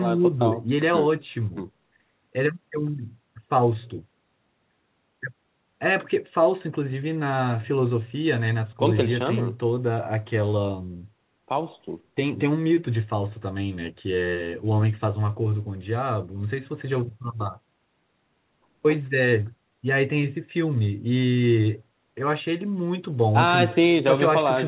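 Nothing in this speech clip stood out as a fault on listening.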